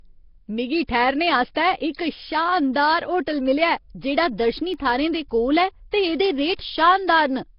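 Speech runs throughout with a rough, hissy halo and a smeared, underwater quality, with nothing heard above 5.3 kHz. This is likely Nellymoser compression at heavy damage, with the sound pointing to a low rate near 22 kbps. That codec fixes its bit budget per block and fills starved bands with noise. A brief hiss leads sharp attacks at 1.55 s (12 ms, right after "मिगी ठैह्रने"), from 1.91 to 1.95 s (31 ms) and at 5.91 s (19 ms). That is pre-echo: the block transform spreads quantisation noise sized for each loud onset into the quiet moment before it, softening the attack. Between 4.58 and 5.06 s, just before "दे कोल", four short ticks, each well under a millisecond, fall at a regular pace. These are CD scratch ticks, where a blemish beats the error correction once per disc turn and the player patches over the lost samples.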